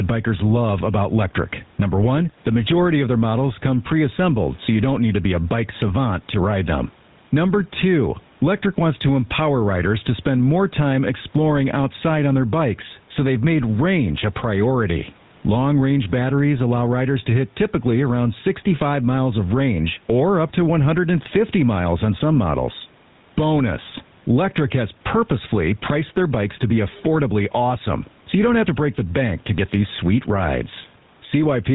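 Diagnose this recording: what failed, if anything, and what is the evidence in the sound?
Gain pumping runs through the whole recording, and it happens at the gain and dynamics stage, before the call path. The faint room noise sits about 41 dB under the speech, and the gain swings by around 10 dB. Loud and quiet syllables come out at nearly the same level. The likely cause is input gain set far too high, with a fast limiter or compressor pulling it down on each peak. A noise gate would do the opposite, cutting the background in the gaps.

The GSM full-rate codec is also present throughout, and its damage is plainly audible. The speech has a buzzy, gravelly roughness, and there is nothing above 4 kHz, which matches a 13 kbps GSM full-rate stream. The codec models the vocal tract and excites it with a sparse train of regularly spaced pulses, so the voice takes on that harsh grain. Simple band-limiting would only make the sound duller, so the roughness comes from the codec.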